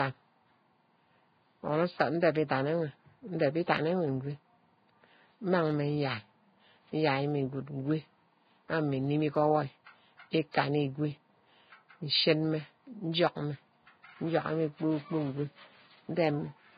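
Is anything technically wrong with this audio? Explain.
Yes. Transcoding between lossy codecs affects the whole clip: the speech has nothing above 4.9 kHz. That ceiling likely comes from a very low-bitrate Vorbis encode, and a later AAC-LC pass kept it while adding its own artefacts. Those two sets of artefacts combine into dull, band-limited speech.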